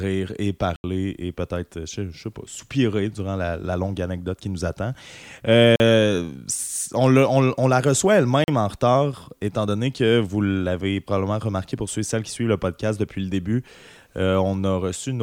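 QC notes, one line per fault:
0.76 to 8.48 s, block of digital silence: Speech drops to silence at 0.76 to 0.84 s (80 ms), 5.76 to 5.80 s and 8.44 to 8.48 s (40 ms each). Output buffers likely went unfilled. The edges are hard and unfaded, so each gap sounds like a brief hole.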